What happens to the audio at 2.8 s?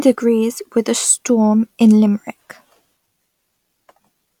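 Nothing goes wrong at 2.8 s; the speech there plays through intact, with no dropout, click or distortion.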